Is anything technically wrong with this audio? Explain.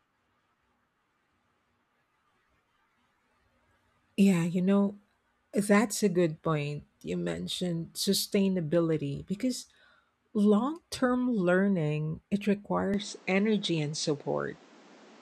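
Yes. From 12.94 s to the end, right after "learning it", the sound turns duller, with nothing above 8.7 kHz. The input likely switched to a poorer device. There is no gap at the switch, and the level holds roughly steady. A new noise floor sits about 30 dB below the speech.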